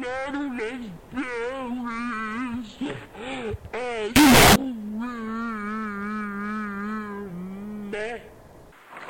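From 4.16 to 4.56 s the audio breaks into very loud, harsh distortion in which soft passages come out as loud as strong ones. This is likely signed and unsigned mixed up in 8-bit samples: the flipped top bit turns each zero crossing into a full-range jump.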